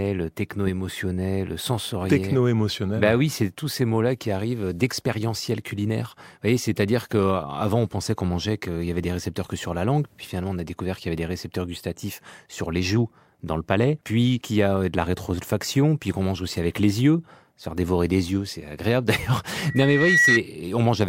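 A speech recording with a loudspeaker feedback squeal from 19.57 to 20.42 s. A steady 1.9 kHz tone swells up over most of a second and ends a few decibels louder than the speech. The microphone was picking up its own loudspeaker, and the loop gain passed unity at that frequency.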